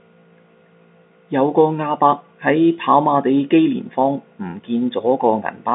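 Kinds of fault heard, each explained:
No faults of any kind are heard in this speech.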